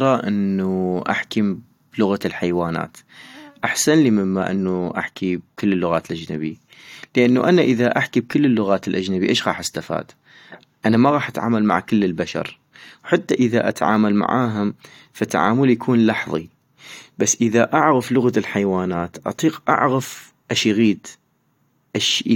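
No technical faults can be heard anywhere in this speech recording. The sound stays continuous and steady at every point.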